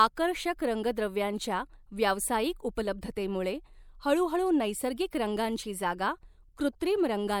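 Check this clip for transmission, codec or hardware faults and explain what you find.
One codec fault is audible: pre-echo at 2.75 s, just after "रंगद्रव्यांच्या व्यावसायिक". A transform codec spread quantisation noise across its block, so noise meant for a sharp attack leaks about 19 ms ahead of it, heard as a brief hiss before a softened, smeared onset.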